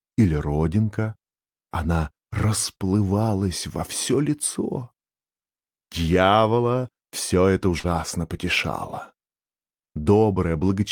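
At 7.79 s, running to about 7.87 s, there is a short concealed packet loss: roughly 40 ms of audio arrived too late to decode, and the receiver patched the hole with about 43 ms of synthesised continuation before blending back. It comes across as a brief smear or wobble. About 11 ms of real material is lost in the join. Unlike a plain dropout, the sound never falls silent. The gap is covered rather than heard as a hole.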